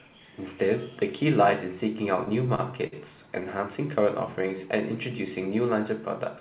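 From 2.16 to 2.95 s the speech shows repeated stalls (stutter). Packets arrived late six times, so the jitter buffer kept running dry and the receiver stretched the last sound to bridge each gap, the longest about 51 ms. Together these fills add 120 ms, about 15% of that span, with nothing lost, so the speech drags and hiccups. A waveform shows short, repeated copies of the preceding cycles, and a spectrogram shows brief frozen patches.

From 4.03 to 4.59 s a jitter buffer slow-down repeats single pitch periods to rebuild the buffer's reserve, adding 41 ms and running at 94% speed. The pitch stays the same while sounds draw out. On a spectrogram, harmonics stretch horizontally without shifting, beneath the call band's 4 kHz ceiling.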